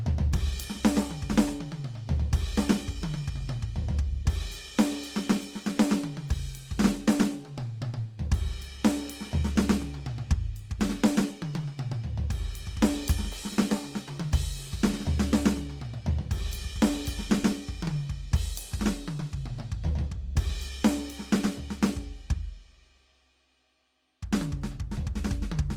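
Throughout, the music sounds grainy and rough, with tones turned noisy where starved bands are refilled, likely from Opus compression in CELT mode at a rate near 24 kbps.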